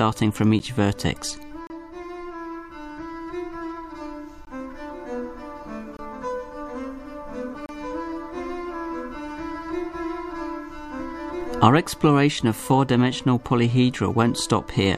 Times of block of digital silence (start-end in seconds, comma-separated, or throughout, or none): 0.59, 1.67-1.70, 4.45, 5.97-5.99, 7.66-7.69